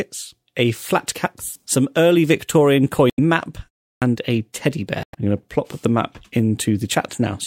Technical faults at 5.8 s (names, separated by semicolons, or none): none